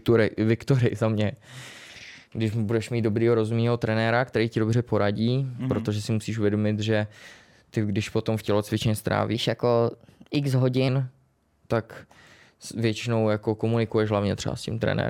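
Speech, with a section at the wrong speed from 9.35 to 10.88 s, right after "když potom v tělocvičně": playback runs 1.12 times fast, raising pitch about two semitones, likely from a clock mismatch. On a spectrogram, the harmonics jump upward and the syllables look compressed.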